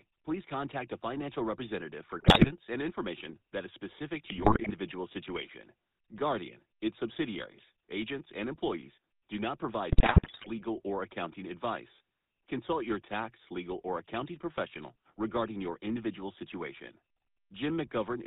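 From the start the speech carries GSM full-rate codec damage, plainly audible. Pulse-driven excitation and a hard ceiling near 4 kHz give a buzzy, gravelly roughness, which fits a 13 kbps full-rate coder. Unlike narrowband telephone filtering, the grit sits inside the voice itself.

GSM bit errors then strike at 2.18 to 2.52 s, 4.24 to 4.71 s and 9.92 to 10.50 s. Corrupted filter, pitch and gain values make the speech squawk, pop and gargle. These are bursty frame-level upsets, not the steady codec roughness.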